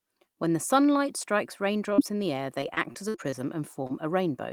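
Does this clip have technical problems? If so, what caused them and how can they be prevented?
Yes. Right after "the sunlight strikes", two lost packets were rebuilt from error correction, at 1.90 to 1.92 s and 1.98 to 2.00 s. Each 20 ms stretch was played from a low-bitrate copy carried in the following packet, so nothing drops out, but the speech turns briefly rough and noisy. A spectrogram shows two thin vertical strips of smeared, grainy texture with no gap in the waveform. Keeping in-band error correction enabled with enough bitrate headroom limits how coarse these copies sound.

Overlapping the second of those, from 1.94 to 2.00 s, there is a short concealed packet loss: about 40 ms never arrived, and the decoder extended the preceding sound to cover it before crossfading back. It is heard as a quick smear or wobble. The waveform shows a suspiciously smooth, repetitive patch, and the spectrogram shows harmonics frozen flat where they should move. 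A larger jitter buffer gives late packets time to arrive.

From 2.61 to 3.91 s, repeated packet loss makes the speech choppy and robotic. There are seven holes, the longest 57 ms, and concealment fills about 13% of that stretch. Around a fifth of a second more was rebuilt from error correction. The spectrogram shows broken, blurred harmonic bands. A steadier network path, or switching to a wired connection, prevents this.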